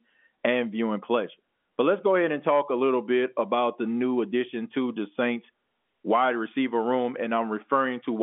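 Speech carried over G.711 telephone coding, band-limited to roughly 200 Hz to 3.5 kHz with nothing above 3.8 kHz, and no faults are present.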